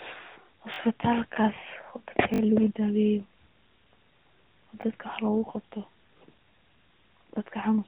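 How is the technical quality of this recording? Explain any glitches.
The recording has four short stutters caused by repeated buffers. A repeated buffer happens when fresh audio misses its deadline, so the device replays its last block. Each repeat is about 20 ms long, which fits a 20 ms buffer. It plays twice more at 0.74–0.78 s, three more times at 2.34–2.40 s, and once more at 4.82–4.84 s and at 6.18–6.20 s. Each one sounds like a hard-edged buzzy flutter, and the audio then resumes with essentially nothing skipped.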